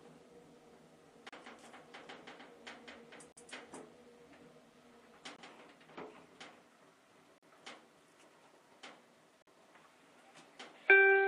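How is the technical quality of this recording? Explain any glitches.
The recording has one recurring fault: gaps between stream segments. Brief silent holes with hard edges cut the sound at 1.29, 3.32, 5.36, 7.38 and 9.42 s, lasting about 20 to 50 ms. They repeat every 2 s because the segment timestamps leave small gaps, which the player fills with silence. No audio is lost.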